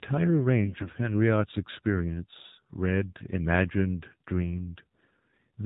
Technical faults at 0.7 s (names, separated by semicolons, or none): AMR narrowband mobile codec; AMR bit errors